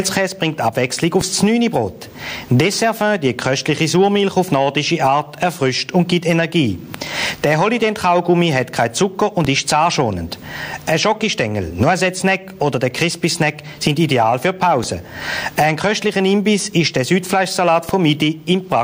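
Gain pumping runs through the whole clip. The gain ducks hard under each loud sound, a swing of around 20 dB. Loud and quiet parts sit too close in level. The likely cause is excessive gain feeding a fast limiter.

A DC step occurs at 1.21, 9.45, 14.84 and 17.89 s. Each time, the waveform's zero line jumps abruptly, giving a low thump. The offset then drains away, as a highpass near 5 Hz would cause. The sound itself continues unchanged.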